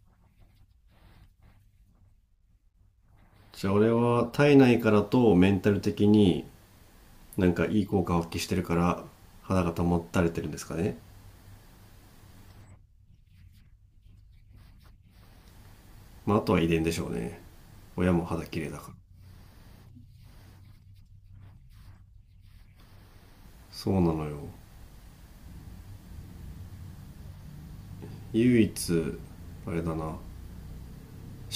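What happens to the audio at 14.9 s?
Nothing goes wrong at 14.9 s; the speech runs on intact through that moment, with no dropout, click or other fault.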